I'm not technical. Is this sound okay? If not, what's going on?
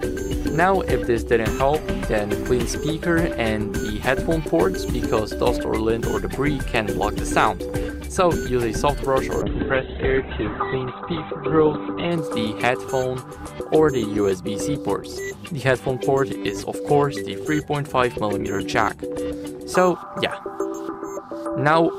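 No. From 9.42 to 12.18 seconds there is a call bitrate drop. The connection weakened, so the call squeezed the sound into far less data. The sound turns muffled and rough, with the crisp top end cut above about 4 kHz, until the connection recovers.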